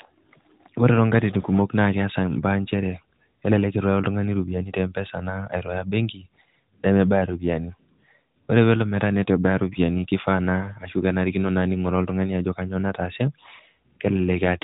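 Nothing goes wrong anywhere in this speech, which simply has the narrow, phone-like band of an AMR narrowband mobile codec with nothing above about 3.8 kHz.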